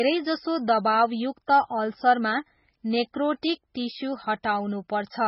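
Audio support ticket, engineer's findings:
Speech band-limited for the whole clip; nothing above 5.6 kHz, sibilants dull. Watery, swirling texture on every phrase, with chirpy metallic edges on s sounds and smeared consonant attacks. Heavy damage throughout. Likely cause: MP3 compression at a very low bitrate, around 16 kbps by the sound. Encoder starved of bits, so it cuts the top band at a fixed point and drops weak frequency lines that flicker on and off between frames.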